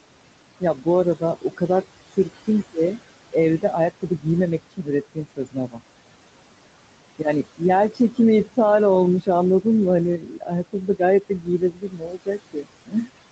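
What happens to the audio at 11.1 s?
At 11.1 s the noise suppressor is cutting into the speech itself. This speech cut by the noise suppressor runs from 10.18 to 13.11 s, affecting roughly one and a half seconds in all. The suppressor mistakes quieter speech for noise and pulls it down by as much as about 20 dB. Soft sounds and endings come out faint or swallowed.

Noise suppressor artifacts are also present here, as throughout the clip. The background is lowered by about 21 dB, band by band, frame by frame. It dips in the gaps and rises under the speech.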